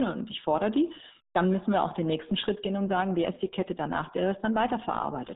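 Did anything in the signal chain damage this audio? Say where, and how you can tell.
Yes, at the codec stage: the whole speech clip carries RealAudio 14.4 codec damage. It sounds muffled and gargly, squeezed into about 150 Hz to 3.7 kHz, and a spectrogram shows a hard empty ceiling above 3.8 kHz throughout. The heavy smearing fits a crude 8 kbit/s dial-up codec.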